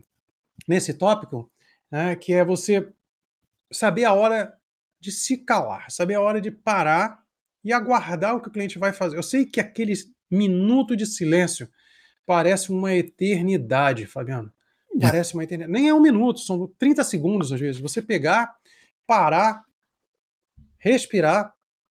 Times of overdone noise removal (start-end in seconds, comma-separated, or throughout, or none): none